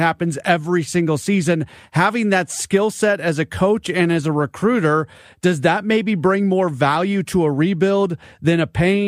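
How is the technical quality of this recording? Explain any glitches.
Nothing stood out on listening; I heard no glitches in this recording.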